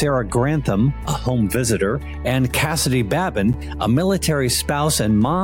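Two separately encoded pieces of audio were joined without trimming the encoder's start-up delay or the padding on the last frame of the earlier piece, so that padded silence stays in at the seam. At 3.53 s this gap at a join of encoded pieces appears as a brief dropout of about 9.4 ms that cuts into continuous sound. Its edges are smeared by the codec, and the audio then resumes exactly where it broke off.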